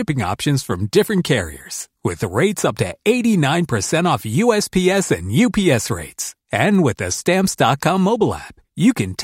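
At 6.75 s, just before "with the", a bit error spike: one flipped bit in a single sample jumps to about -18 dBFS, heard as a sharp broadband tick.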